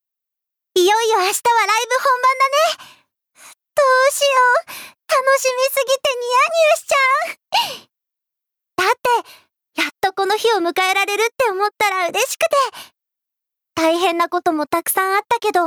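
Gain pumping runs through the whole recording: the level swings by roughly 10 dB, leaving levels squashed. The likely cause is input gain set far too high, with a fast limiter clamping down. Unlike a noise gate, the background never cuts to silence.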